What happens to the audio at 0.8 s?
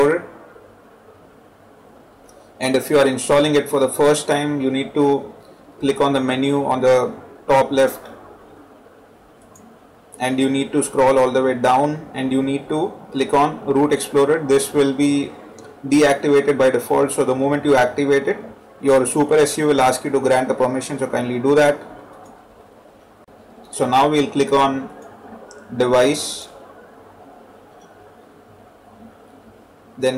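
Hard clipping is present at 0.8 s, as it is throughout the clip: the signal is driven about 9 dB beyond what a stage can pass, so around 3 percent of samples have their peaks sheared flat, adding high harmonics heard as harsh crackle and fuzz on loud moments.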